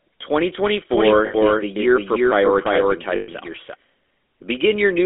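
GSM full-rate codec, throughout the clip: the speech has been squeezed through an early mobile-phone coder that models the vocal tract and drives it with a coarse pulse train, a rough sound that fits the 13 kbps full-rate codec. The band runs from about 300 Hz to 3.6 kHz, so the speech is thin and muffled. The codec damage is plainly audible as a buzzy, gravelly grain over every syllable.

Doubled audio track, from 0.91 s to 3.75 s: a second full-band copy of the same speech runs behind the original by roughly 300 ms, at about the same level. It has no room colour or decay, and it cuts in and out abruptly at those edges. This is likely a second, slower capture path mixed back in, or an edit that left two offset copies overlapping.

Lost GSM frames, at 1.26 to 1.35 s and again at 3.16 to 3.29 s: the decoder lost stretches of 80 ms and then 120 ms, which fits runs of four and six 20 ms frames. 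It filled each gap by repeating the last good frame's settings. Each dropout is heard as a brief metallic, rough ring that holds the previous sound.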